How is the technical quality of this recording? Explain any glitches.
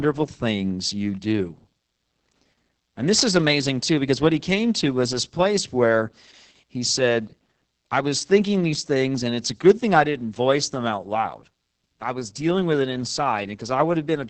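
Quality is poor throughout because of heavy Opus voice compression. The codec ran its SILK linear-prediction coder in wideband mode at a very low rate, consistent with about 10 kbps, coding the excitation coarsely. Nothing survives above 8.7 kHz, so the speech sounds muffled, hoarse and slightly robotic from start to finish.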